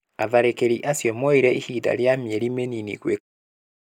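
No technical faults are present.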